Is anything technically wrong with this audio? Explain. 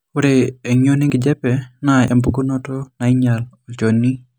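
Yes. At 1.1 s and 2.08 s the speech jumps ahead, missing about 40 ms then about 20 ms, most likely a dropped buffer (overrun) where unread samples got overwritten.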